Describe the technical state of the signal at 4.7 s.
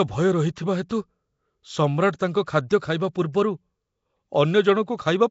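At 4.7 s the speech carries the same damage heard across the whole clip: a rough, hissy halo and a smeared, underwater quality, with nothing above 7.7 kHz. This is likely Nellymoser compression at a rate that fits 32 kbps, where weak bands receive no bits and are filled with noise.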